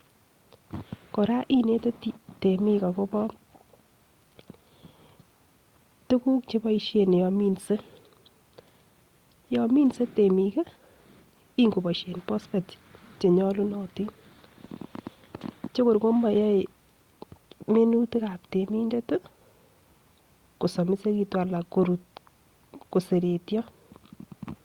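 Lost packets rebuilt from error correction occur in this speech recording at 9.81 to 9.95 s, at 14.69 to 14.71 s, and at 18.63 to 18.73 s, just after "minutik ab". There is no gap at any of these points. Each lost stretch was covered by a low-bitrate backup copy carried in the following packet, so the decoder played a coarser version instead of silence. The result is a short rough, noisier patch lasting about 80 ms, 20 ms and 60 ms respectively, which fits runs of roughly four, one and three 20 ms packets.

Short concealed packet loss sits at 14.65 s, right after "che nyolunotin" and immediately before the second rebuilt patch. About 20 ms of audio arrived too late to use, and the receiver had no backup copy. It covered the hole by extending the preceding sound, then faded back into the real signal, leaving a brief smear or wobble.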